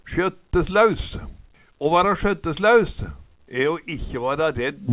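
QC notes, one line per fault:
No faults to log. The sound reaches the listener over a WebRTC call path carried as G.711 mu-law at 64 kbps, so nothing is heard above 4 kHz.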